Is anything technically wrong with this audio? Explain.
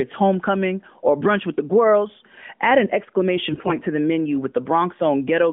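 Yes. From 3.50 to 3.78 s, just before "to the menu with", the speech turns hoarse, scratchy and gargly while keeping its pitch and level. These are AMR bit errors: heavy corruption of the unprotected bits across about a dozen 20 ms frames misplaced the excitation pulses and skewed the finer pitch, gain and spectral values. Around it, the narrowband AMR-NB path holds the speech to a telephone band of 200 Hz to 3.5 kHz.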